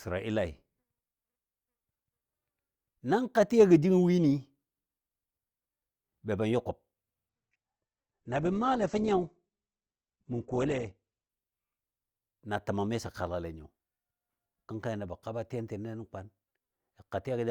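From 7.29 to 11.29 s the adaptive stream drops to a lower bitrate, abruptly and gaplessly: nothing survives above 8.3 kHz, and codec artefacts thicken.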